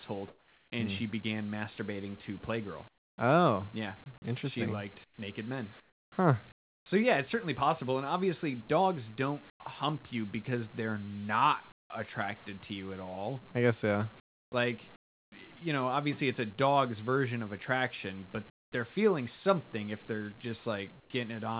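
The pauses at 0.28–0.72, 2.88–3.18, 5.04–6.86, 9.5–9.6, 11.72–11.9, 14.2–15.32, 18.5–18.72 and 21.0–21.1 s carry comfort noise in place of the background, likely from discontinuous transmission. The real room sound becomes a flat, featureless hiss, up to about 24 dB quieter. On a spectrogram it shows as smooth, uniform bands, and on the waveform as level steps.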